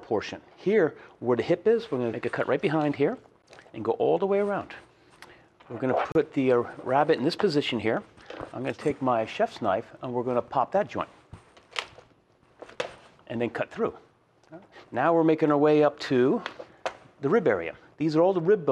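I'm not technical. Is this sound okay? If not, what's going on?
No. There are two brief silences, a gap at a join of encoded pieces, at 3.42 s (about 14 ms) and from 6.12 to 6.15 s (about 33 ms). The sound was saved in separate chunks and glued together, leaving each chunk's padding silence in place. Unlike a dropout, nothing is lost; the sound resumes exactly where it stopped.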